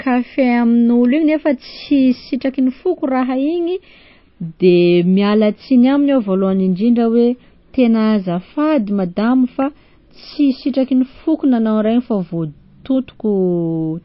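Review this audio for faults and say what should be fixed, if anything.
The whole clip has plainly audible codec damage, likely from MP3 compression at a starved bitrate, somewhere near 26 kbps by the sound. Nothing survives above 5.5 kHz, so the speech is dull, and weak frequency lines flicker between frames, giving that watery swirl on sibilants. Encode from the original source at 128 kbps or more, or use a lossless format.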